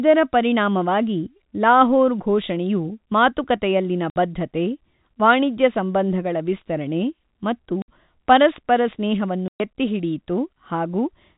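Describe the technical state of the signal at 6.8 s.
At 6.8 s the speech is intact, carried through G.711 telephone coding that is working as expected, with nothing above 4 kHz and only its faint level-following quantisation hiss beneath the signal.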